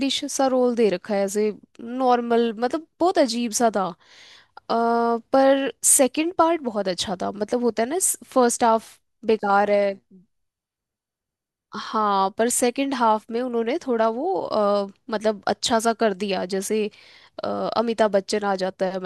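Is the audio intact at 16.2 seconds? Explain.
Yes, at 16.2 seconds the speech plays through intact, with no audible dropout, glitch or distortion at that moment.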